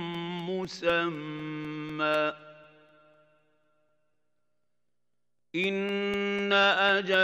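A driver or USB stall interrupting the stream every 0.25 s, from 0.15 s to 7.14 s, causes periodic USB or driver dropouts: roughly millisecond-long silent gaps heard as steady ticks.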